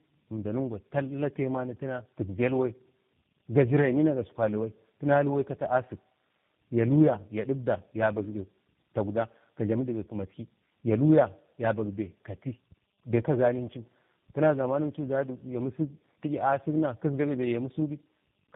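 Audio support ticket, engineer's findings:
Tandem speech coding, whole clip. Rough, muffled, warbly speech, nothing above 3.6 kHz. Sounds like three speech codecs in series, consistent with CVSD, GSM full rate, then G.729A. Each re-encodes the previous decoder's damaged output, so errors compound.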